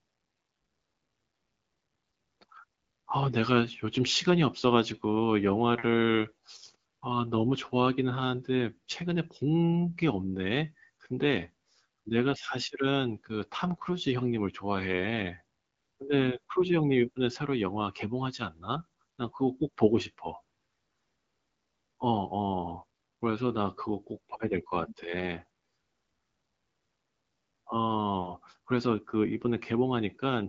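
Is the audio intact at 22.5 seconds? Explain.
Yes, the audio is intact at 22.5 seconds, with no fault at that moment.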